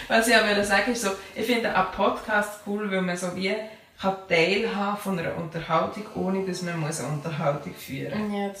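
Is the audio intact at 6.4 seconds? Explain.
No, at 6.4 s you're right in the middle of a GSM phone buzz running from 5.92 to 7.81 s. A nearby 2G phone in a call pulses 217 times a second, the audio circuitry rectifies those bursts, and you get a steady, raspy buzz about 22 dB below the audio.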